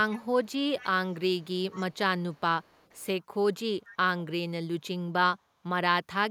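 A delayed copy of the speech trails it by about half a second: echo leak, at 0.11, 0.44, 0.79, 1.13 to 1.97, 2.32, 2.62 to 3.06 and 3.84 s. It's faint and scrappy, likely a far-end speakerphone whose echo canceller let some pickup through.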